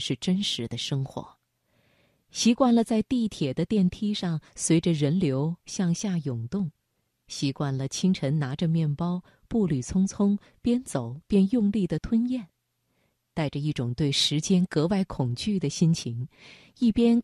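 At 5.99 s and again at 11.98 s, the speech jumps with a tiny skip. This is overlap between stream segments. Adjoining segments claimed the same moment, so about 18 ms and 6 ms were trimmed away. The repeat every 6 s fits segment boundaries.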